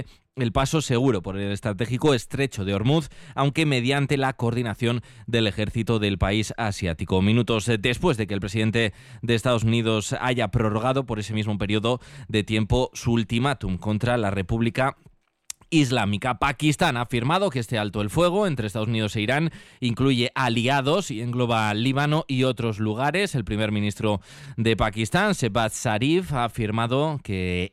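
No technical fault can be heard anywhere in the clip; the signal carries through without any audible disturbance in its level, timing or frequency content.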